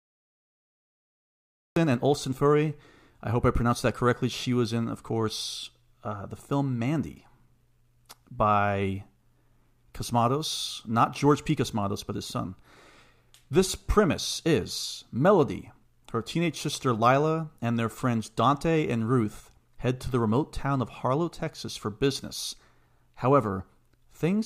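A cut-off start: digital silence runs until 1.76 s, then the speech begins abruptly mid-sound, with no natural attack, because recording began late.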